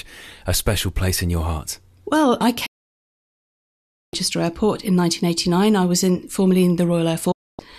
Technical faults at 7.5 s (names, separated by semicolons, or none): digital broadcast dropout